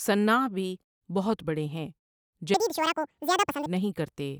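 A section at the wrong speed runs from 2.54 to 3.66 s. The speech there plays 1.88 times too fast and jumps roughly ten semitones higher, sounding high and hurried. The likely cause is a section clocked incorrectly during editing or playback, shifting speed and pitch together.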